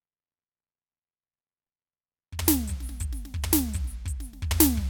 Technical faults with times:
none

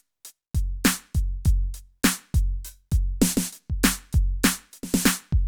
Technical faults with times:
none

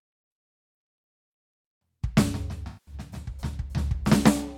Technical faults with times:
2.67-2.95 AAC frame loss with concealment

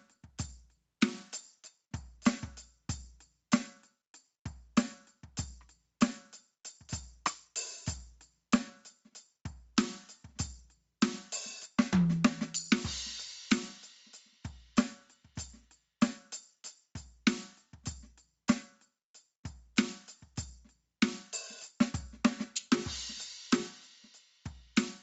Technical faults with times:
0.00-25.02 gain pumping

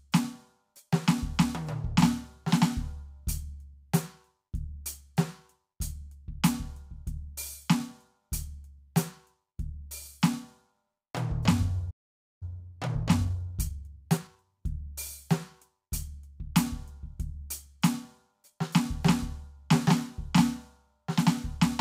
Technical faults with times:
11.90-12.43 playback stall
12.43-14.45 time-compressed catch-up

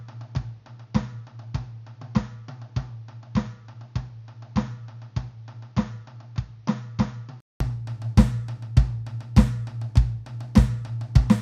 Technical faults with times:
0.00-7.60 input switched to a poorer device

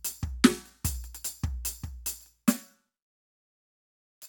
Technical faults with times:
none

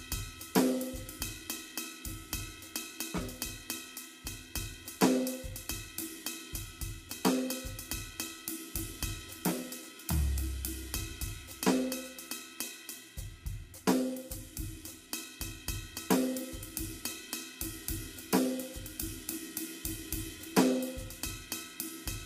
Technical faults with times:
0.00-22.25 low-delay AAC compression

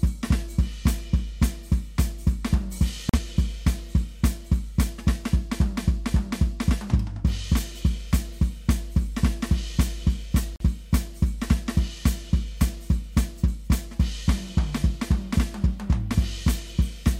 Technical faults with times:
3.09-3.19 digital broadcast dropout
10.56-10.64 digital broadcast dropout

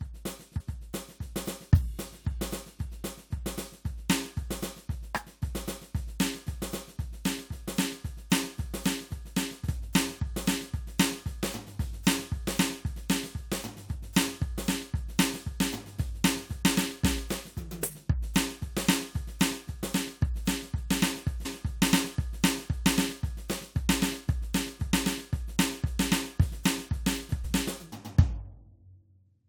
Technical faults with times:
0.59-0.61 damaged data in a compressed stream
9.67 damaged data in a compressed stream
21.44 damaged data in a compressed stream
27.43 damaged data in a compressed stream

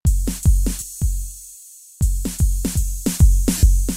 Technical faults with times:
0.80-0.82 lost LE Audio frames
3.58-3.63 lost LE Audio frames

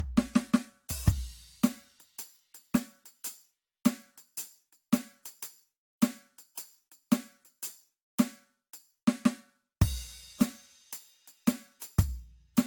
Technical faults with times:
0.00-12.67 generation loss

